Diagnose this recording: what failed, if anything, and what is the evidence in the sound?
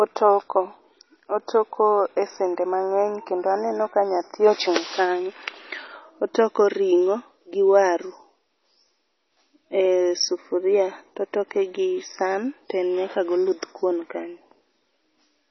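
Throughout, the speech sounds watery, with nothing above 5.9 kHz. The likely cause is heavy MP3 compression at the codec stage, which fits a 24 kbps bitrate cutting the treble.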